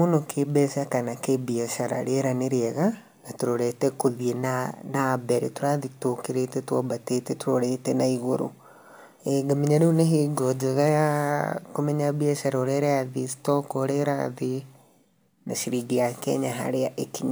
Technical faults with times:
0.00-17.31 crude rate conversion

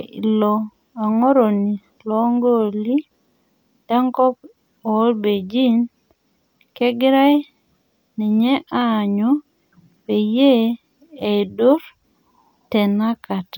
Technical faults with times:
none

